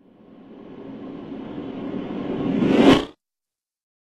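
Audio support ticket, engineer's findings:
Adaptive stream at a lower bitrate from 1.40 s: sudden loss of everything above 12.4 kHz, fitting a low-rate HE-AAC rendition. No gap, unlike a dropout.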